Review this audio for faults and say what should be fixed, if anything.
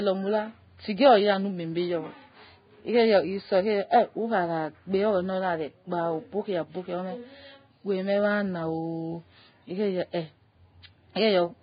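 The speech was likely run through Vorbis compression at a very low setting, with heavy damage that fits a bitrate near 15 kbps. Throughout, nothing remains above 4.9 kHz, and the surviving treble is quantised so coarsely that detail turns to hiss, leaving grainy tone and smeared attacks. Encoding at a much higher Vorbis quality level, or keeping a lossless copy, would prevent this.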